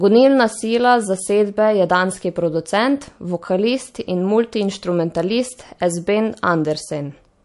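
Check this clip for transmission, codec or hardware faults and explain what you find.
One fault runs through the whole speech clip: MP3 compression. The damage is plainly audible from start to finish. Nothing is present above 11.3 kHz. That hard ceiling and the plainly audible artefacts fit a low bitrate, around 48 kbps. It is likely an MP3 encoder short of bits, cutting the treble at a fixed point and dropping weak frequency lines. Those lines flicker between frames. The result is a watery, swirly texture, chirpy s sounds and smeared attacks.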